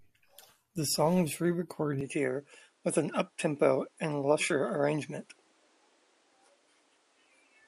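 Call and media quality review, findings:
Speech band narrows from 2.01 s to end, nothing above 10.7 kHz, with a faint new noise floor; likely input switched to a poorer device, not codec, given no gap or level jump.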